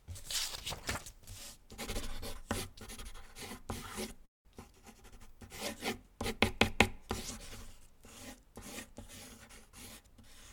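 Call audio freeze at 4.25 to 4.47 s: the sound stalls into a brief fading tail and about 180 ms of silence, then resumes unbroken, likely from delayed packets draining the jitter buffer.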